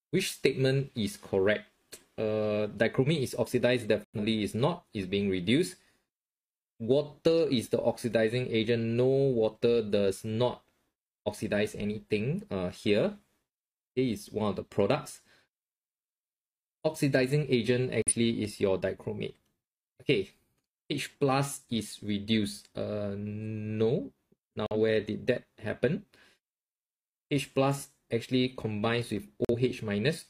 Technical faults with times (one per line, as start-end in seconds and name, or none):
4.04-4.19 corrupt frame muted
18.02-18.13 corrupt frame muted
24.62-24.80 corrupt frame muted
29.45-29.55 corrupt frame muted